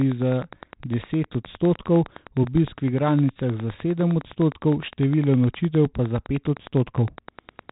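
From the first moment to the end, a nearby Wi-Fi radio is coupling into the audio circuit, which rectifies its regular beacon transmissions into audible clicks. This Wi-Fi interference shows up as a steady ticking repeating every 102.4 ms, just under ten ticks a second, sitting roughly 25 dB below the speech. Because it never stops, the ticking is most exposed in pauses, where it runs on like a mechanical clock behind the voice.

Also present throughout is heavy 4-bit ADPCM compression. Each sample is coded as a coarse 4-bit step from a predicted value, and the rate points to a 32 kbps stream. The step size adapts as it goes, so the error becomes noise that rises and falls with the speech, a gritty hiss riding every loud syllable, with harsher distortion on sharp onsets where the step cannot grow fast enough. Nothing reaches above 3.8 kHz, which fits a low sample rate and leaves the speech dull and muffled.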